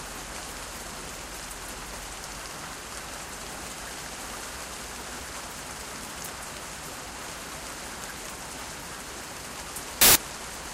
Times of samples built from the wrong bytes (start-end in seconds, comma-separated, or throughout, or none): 10.01-10.15